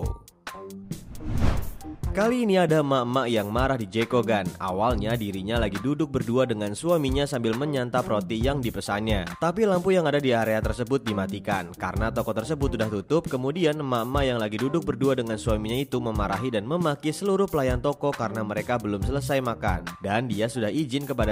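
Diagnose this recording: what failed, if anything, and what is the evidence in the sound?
Nothing failed here as far as I can hear: there's no point in the recording where any stage of the chain, from wiring through to playback, leaves a mark on the sound.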